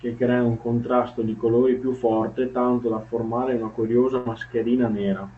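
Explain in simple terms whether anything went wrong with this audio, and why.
At about 4.17 s a burst of packet loss hit the call: a run of audio packets never arrived in time. The receiver filled the gap by stretching and fading the last sound for 80 ms, then the speech jumps ahead at 4.27 s with 80 ms missing.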